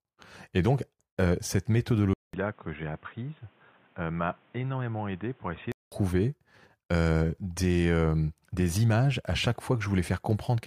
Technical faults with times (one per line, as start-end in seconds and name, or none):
2.13-5.92 input switched to a poorer device